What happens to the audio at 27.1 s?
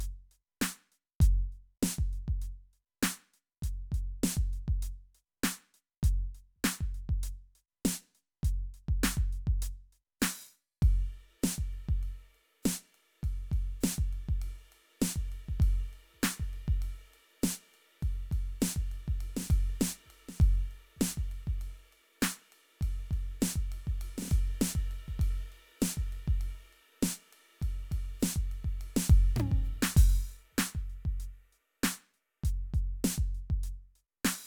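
At 27.1 s the music carries a grainy hiss and roughness that swells with the louder, brighter passages. This is sample clock jitter, present across the whole clip rather than only here. The converter's clock wanders by a few microseconds, so each sample is taken slightly early or late. Where the waveform changes fastest, that timing error becomes an amplitude error, adding noise roughly 25 dB below the music.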